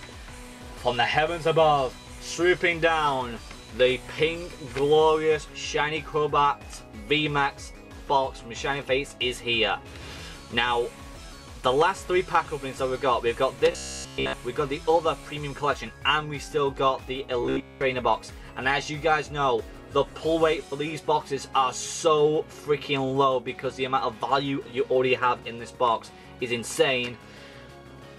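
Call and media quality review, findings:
Rigid metallic buzz near 66.7 Hz, 13.72–14.35 s (entirely repeated) and 17.43–17.81 s (mostly repeated). Robotic sound from repeated short buffers: the player likely loops the last 15 ms block while skipping incoming audio, which fits starved buffer delivery.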